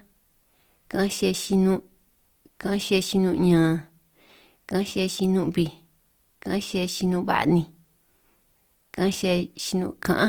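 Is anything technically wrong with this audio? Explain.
Yes. Throughout the speech there is plainly audible Opus compression: a rough, grainy tone and noisy upper harmonics. The likely cause is CELT mode at a low bitrate near 24 kbps, where starved bands are refilled with folded or noise content. A spectrogram shows energy reaching 20.2 kHz but smeared and granular, with few holes.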